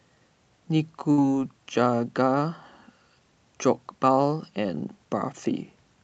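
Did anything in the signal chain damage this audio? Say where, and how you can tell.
Yes: a burst of packet loss on the network, at 1.11 to 1.20 s. The receiver holds the last speech sound for about 62 ms, fading it, then resumes with about 60 ms skipped. A spectrogram shows frozen, dimming bands, then an abrupt restart.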